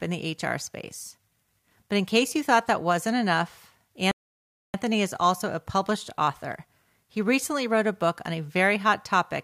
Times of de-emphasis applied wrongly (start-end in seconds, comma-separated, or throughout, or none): none